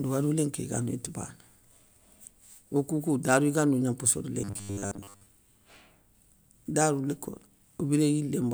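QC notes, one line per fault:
4.42–5.26 s, robotic sound from repeated short buffers: after "gna mposso da" the speech becomes a rigid metallic buzz locked at 100 Hz, likely a 10 ms chunk replayed while new audio arrived late, so most of this span is repeats. Unlike stutters or dropouts, the buzz stays at a fixed rate.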